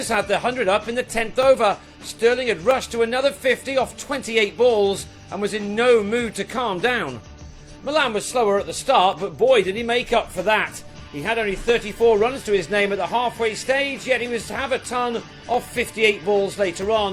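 From about 0.14 s right through to 16.83 s there's a steady tick, a click or pop landing every 1.28 s, roughly fifteen of them in all. That regularity points to clock drift buffer slips: two devices likely running on separate clocks a few hundred ppm apart, so the buffer between them creeps until a chunk of around fifteen samples gets dropped or repeated, then the cycle starts over.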